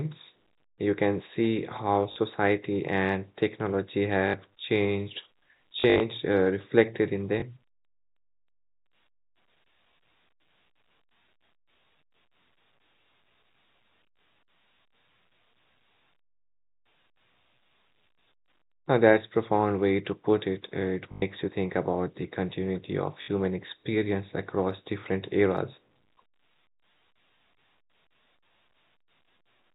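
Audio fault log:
2.12 to 23.28 s, packet loss with last packet repeated: gaps at 2.12 s (40 ms), 4.28 s after "and technology" (60 ms), 5.8 to 6.0 s before "uh reflected in" (120 ms scattered, longest run 60 ms), 7.4 s (20 ms), 21.12 s before "you think about the" (100 ms), and 23.22 s (60 ms). The lost stretches were filled by replaying the last received packet, and the replays seldom join in step with the pitch. The longer runs buzz at the packet rate, which fits 20 ms packets, and sound like a brief robotic stutter over the 4 kHz-limited telephone band.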